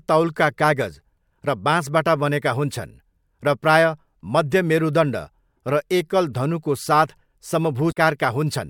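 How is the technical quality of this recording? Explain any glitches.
There is one glitch in this speech recording, near the end. From 7.89 to 7.97 s, damaged data in the compressed stream makes the decoder misread frames and lose sync. It comes out as a brief garbled blip. A spectrogram shows this as a short, smeared broadband block, and the waveform shows an abrupt discontinuity.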